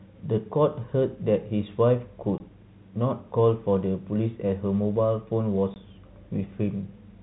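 Telephone speech, band-limited below 4 kHz as expected of G.711 coding, has two short holes from packet loss filled with silence, at 2.38 to 2.40 s and 5.74 to 5.76 s. Each gap lasts 20 ms, which fits one lost 20 ms packet replaced by digital silence. On a waveform the trace drops abruptly to a flat line. A spectrogram shows thin, fully blank vertical strips.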